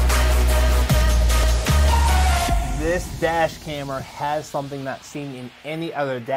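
An overlap between stream segments produces a brief click or tiny skip at about 1.43 s in this audio. The sound arrives in segments of roughly one second, and the time stamps of two neighbouring segments claim a small stretch of the same time. The player trims that supposed duplicate, but the material was never actually repeated, so about 5 ms of real sound is discarded and the waveform jumps abruptly across the gap.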